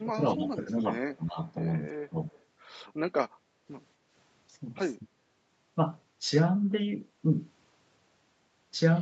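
Speech suppressed in double talk from 0.0 to 0.79 s, 1.07 to 1.38 s and 2.1 to 2.27 s: the speech dips in pieces, by about 15 dB at first and about 10 dB at 2.1 s. The likely cause is an echo canceller that couldn't tell overlapping talk from loudspeaker echo and turned both down. Echo leak from 2.32 to 2.43 s: a faint copy of the speech arrives 230 ms late and about 35 dB below it, likely residue that an echo canceller failed to remove. Speech suppressed in double talk from 5.02 to 5.21 s: a short dip but a deeper one, about 30 dB, likely from the same kind of suppression.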